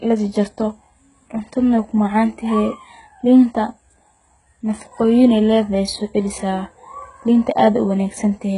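From start to finish the speech carries heavy codec damage, and it sounds like HE-AAC compression, likely at a very low rate, something around 12 kbps. The treble above the core band isn't the real thing: it's been rebuilt by copying lower bands upward and shaping them with a rough envelope, so the harmonics up there don't line up with the ones below. You hear it as gritty, lispy s sounds with a metallic sheen, and the top stops dead at about 11.1 kHz.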